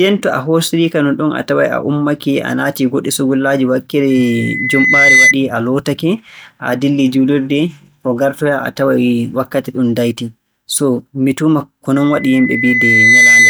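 Loudspeaker feedback squeal at 4.10–5.35 s and again from 11.96 s to the end: the mic-speaker loop runs away at 2 kHz, swelling over about a second (then a second and a half) to roughly 10 dB above the speech. On a spectrogram it shows as a thickening horizontal line at 2 kHz, and on the waveform as a growing envelope.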